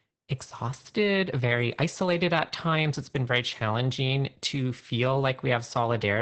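Right through the speech you can hear heavy Opus voice compression: nothing above 8.8 kHz survives, and the coarse, SILK-style excitation coding leaves it muffled, hoarse and a bit robotic, which fits a wideband setting squeezed down to roughly 10 kbps.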